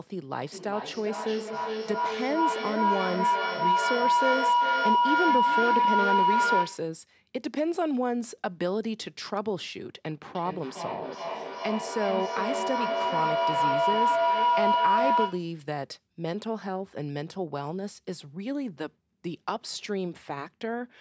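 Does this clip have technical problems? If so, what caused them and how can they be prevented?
Yes. Feedback howl occurs twice, from 0.4 to 6.94 s and from 10.26 to 15.57 s. A microphone is picking up a loudspeaker playing the same call. Each trip round that loop returns louder, so the sound narrows to a tone near 1 kHz. It pulses roughly every 0.4 s. It peaks about 6 dB above the speech in the first event and about 5 dB above it in the second. Using headphones, or muting all but one device in the room, breaks the loop.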